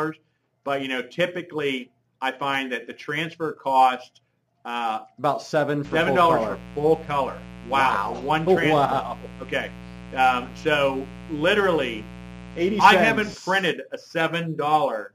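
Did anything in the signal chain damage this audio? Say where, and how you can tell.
Yes. From 5.84 s to 13.35 s a steady, raspy mains buzz sits well under the sound. Its 60 Hz harmonic series reaching into the kilohertz range points to analogue wiring, where switching spikes from a dimmer, rectifier or unshielded line leaked in twice per cycle.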